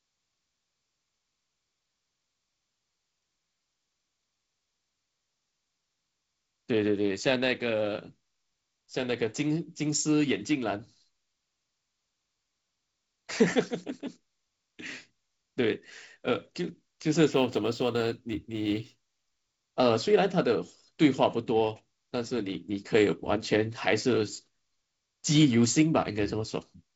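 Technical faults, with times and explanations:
17.33 to 19.70 s, sample clock jitter: the converter's timing wanders by a few microseconds, so each sample lands slightly off its proper instant. Steep, fast-changing parts of the speech suffer most, leaving a grainy hiss riding roughly 40 dB under the signal that swells on loud and sibilant sounds and drops away in pauses. A spectrogram shows a diffuse noise haze that tracks the speech energy, reaching up toward the G.722 band edge near 7.7 kHz.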